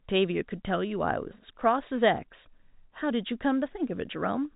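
Nothing goes wrong anywhere in this bit of speech; it just sounds like an ordinary phone call, with the G.711 telephone coding letting nothing above 3.8 kHz through.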